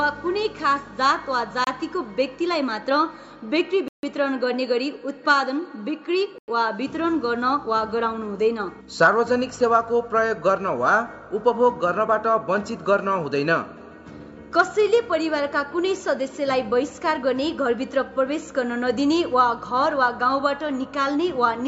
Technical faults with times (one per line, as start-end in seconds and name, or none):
1.64-1.67 Bluetooth stall
3.88-4.03 Bluetooth stall
6.38-6.48 Bluetooth stall